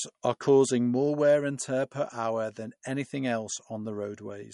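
Likely MP3 compression throughout, starved of bits in a way that fits about 48 kbps, leaving the speech watery and swirly with clipped treble and chirpy s sounds.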